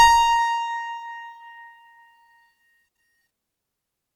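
No technical faults can be heard anywhere in the music.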